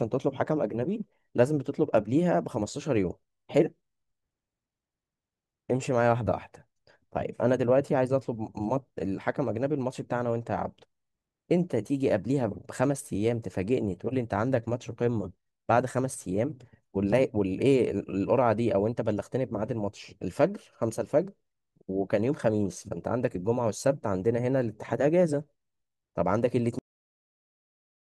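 Right at 26.79 s the speech just stops dead, a cut-off end rather than a natural finish. The final stretch of audio never got written or played back, so the sound is chopped mid-flow and drops straight into digital silence for the last 1.3 s or so, with no decay or room tail at all. It's an abrupt, unnatural halt, like someone pulled the plug partway through.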